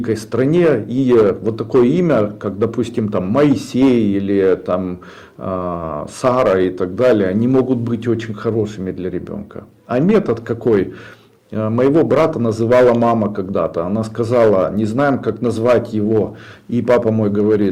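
A harsh fuzz rides every loud peak throughout: hard clipping, with the signal driven about 9 dB past full scale, flattening roughly three percent of samples.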